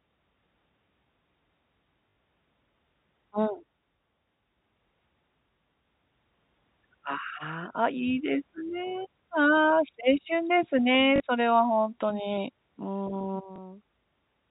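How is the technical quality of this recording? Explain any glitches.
The recording has three brief glitches from packet loss with last packet repeated, heard over a G.711 telephone-band channel that stops at 4 kHz.

Packet loss with last packet repeated occurs at 2.10–2.16 s (60 ms), 11.16–11.20 s (40 ms) and 13.56–13.58 s (20 ms). The receiver replayed the previous chunk of audio to fill each gap, which fits 20 ms packets. The repeats give a brief robotic buzz in the two longer runs and a small blip at 13.56 s.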